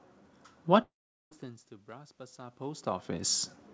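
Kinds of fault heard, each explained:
Long network dropout: the audio cuts out from about 0.82 to 1.33 s, a buzzy fill fades into silence, and the speech resumes with that half-second likely lost in transit.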